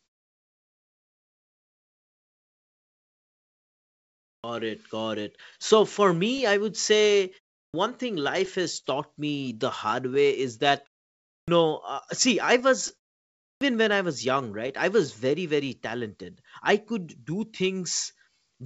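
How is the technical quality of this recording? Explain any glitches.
The speech carries three kinds of glitch: recurring timing hiccups across the whole clip, four word onsets that begin abruptly with their first sounds missing, and three stretches of brief ticks and smears. The band-limited, call-like tone, with nothing above 8 kHz, fits a G.722 call link.

Clock drift between sender and receiver: Small stutters and skips recur at uneven intervals from start to finish, sometimes a tiny repeat, sometimes a hairline gap. The sender's clock appears to run slow, by roughly three percent, against the receiver's. The jitter buffer keeps draining as a result, so the receiver has to stretch or repeat short pieces to keep playing, and occasionally it runs dry for an instant.

Clipped start after a pause: At 4.31, 7.61, 11.34 and 13.47 s, speech jumps in out of silence with its opening sound shaved off. 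The missing portion is about 127, 128, 138 and 142 ms respectively. The playback device goes idle during the quiet before each onset, after the opening 4.31 s and after pauses of 0.3 to 0.56 s at the later points. It needs that fraction of a second to wake and lock again, so the first sound is swallowed.

Scattered short gaps: Three stretches carry brief ticks, smears and hiccups. From 5.02 to 8.86 s there are about seven, roughly 100 ms concealed in total, the longest around 40 ms. From 10.15 to 12.91 s there are about seven more, roughly 50 ms in total, none longer than about 10 ms. From 14.39 to 16.02 s there are about four similarly tiny ones. Each comes from a lost or late packet that the receiver covered by extending the preceding sound.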